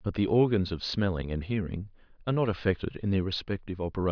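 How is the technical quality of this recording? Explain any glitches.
No glitches or technical faults can be heard here.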